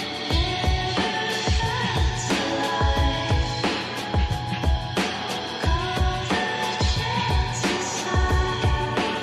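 Nothing in the recording stood out as a technical problem on listening.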